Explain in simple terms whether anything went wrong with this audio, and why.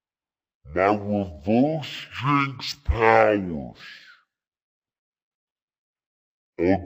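Stereo read as mono runs through the whole clip. The speech plays at half speed and a full octave too low. Stereo audio stores left and right samples in turn, and here they were played one after another as a single channel, stretching everything out.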